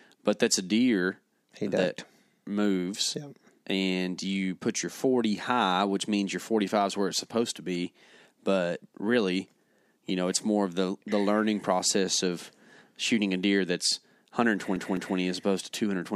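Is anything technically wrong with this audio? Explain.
Yes. CD stuck on one turn, 14.76 to 15.18 s: a scratch kicks the laser back a track, so one 0.21 s slice of speech replays twice, muting at each jump.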